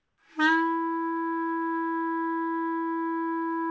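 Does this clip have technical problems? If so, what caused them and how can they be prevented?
Yes. From 0.00 to 0.18 s the real background is replaced by comfort noise: a steady, featureless hiss about 2 dB quieter, sitting about 49 dB below the loud parts. The likely cause is discontinuous transmission, where the sender's activity detector pauses sending and the receiver synthesises shaped noise until sound resumes. To prevent it, disable DTX or VAD on the sending side. The call path, with nothing above 8 kHz, fits G.722.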